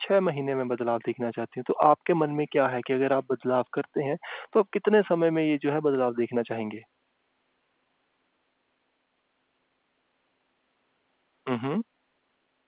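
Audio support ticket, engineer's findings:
Nothing stood out on listening to the speech, which arrives over a mu-law telephone path with the narrow band, topping out below 4 kHz, that an 8 kHz line gives.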